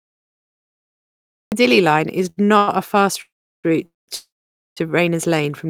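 Cut-off start at 0 to 1.52 s: the speech recording opens on digital silence, and the talking begins abruptly at 1.52 s in the middle of a sound, with no natural attack, because capture started after the speaker was already under way. Short stalls from a late packet occur at 2.29 to 2.39 s, 2.45 to 2.50 s and 2.58 to 2.69 s, the last two just before "a fast route". Each time a packet arrived late, the jitter buffer ran dry, and the receiver held the last sound for 73, 29 and 98 ms, so a sound drags slightly before resuming with nothing lost. Call audio freezes follow at 3.21 to 3.66 s, 3.86 to 4.10 s and 4.16 to 4.79 s, the last right after "a fast route": the sound is briefly extended, then drops to silence for about 370, 190 and 500 ms before picking up where it stopped. The likely cause is packets held up in transit, emptying the jitter buffer and leaving inserted gaps rather than missing audio.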